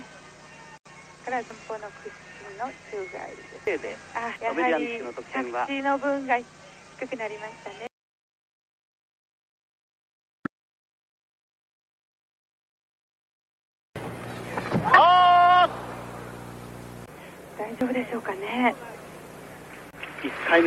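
No technical faults can be heard anywhere in the recording, and the signal holds steady and continuous throughout its whole duration.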